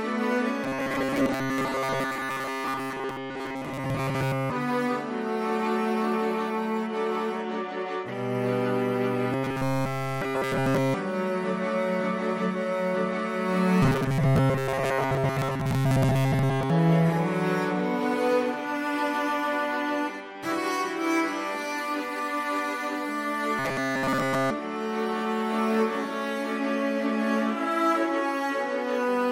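Robotic sound from repeated short buffers occurs at 0.64–4.52 s, 9.33–10.94 s, 13.83–16.70 s and 23.59–24.50 s. Each stretch carries a rigid, metallic buzz at a fixed 134 Hz. That pitch fits a buffer of about 7.5 ms being replayed over and over, likely because new audio arrived too seldom and repeats filled the gaps. The second and fourth stretches are almost entirely buzz, while the first and third let some of the real sound through.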